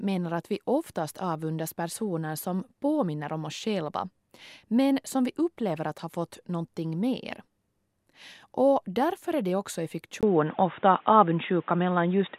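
Right after "är det också i", at 10.21 s, there's a 20 ms gap, then the speech turns dull and boxy with nothing above 3.8 kHz, a level shift of around 5 dB, and a faint new noise bed. That's likely an input switched to a poorer device.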